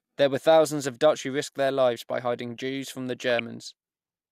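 At about 1.67 s, right after "who risked" and before "lives by hiding", there's a short blip of DAB burbling, and it comes back from 3.30 to 3.40 s after "from the". Bit errors are slipping past the error correction, around 0.2 percent and then 0.15 percent, so a few MP2 frames decode with wrong samples. Short blips of noise land in single sub-bands.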